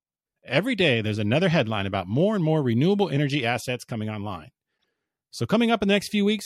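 At 4.74 to 4.84 s, right after "energy assets coming online", a burst of damaged data in the compressed stream produces a short glitch lasting about 90 ms. Corrupted bytes made the decoder misread those frames and lose sync until it found a valid header.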